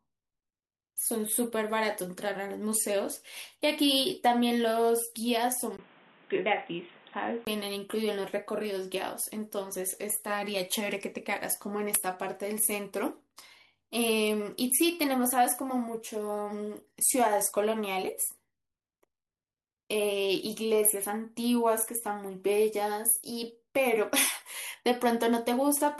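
At 5.77 s a 20 ms gap opens, then from 5.77 to 7.47 s the speech turns boxy and dull, with nothing above 3.8 kHz and a new noise floor roughly 30 dB down at similar level. The likely cause is the input switched to a poorer device.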